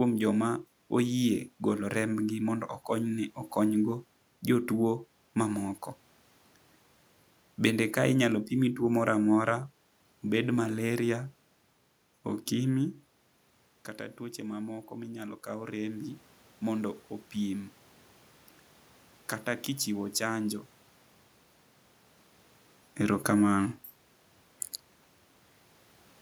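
Speech recorded in a room with audible background noise, with one fault: automatic gain rising from 13.96 to 17.79 s. Shortly after the talker moves away from the microphone around 12.5 s, the input falls by about 13 dB. The gain control then lifts its gain by about 5 dB over nearly four seconds, so voice and room noise swell together. On a waveform, the envelope grows steadily across that span. On a spectrogram, the noise floor between words brightens along with the speech.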